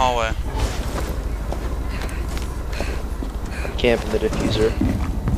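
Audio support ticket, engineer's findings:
Listened through the full clip and found nothing that stood out as needing attention.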